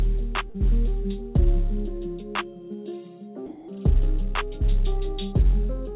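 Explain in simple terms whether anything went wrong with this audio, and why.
Two things went wrong. At 0.50 to 0.56 s there's a short concealed packet loss: about 40 ms of audio arrived too late, so the receiver papered over the gap by extending the last bit of sound, giving a quick smear or wobble.

Then from 3.46 to 3.68 s the sound gives way to even hiss, which is likely sound dropped by the voice detector. The sender treated roughly 180 ms as background, stopped sending, and the receiver filled 220 ms with comfort noise.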